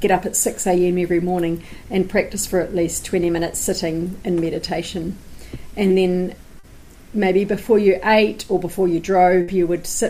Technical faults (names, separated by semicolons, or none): short concealed packet loss; burst of packet loss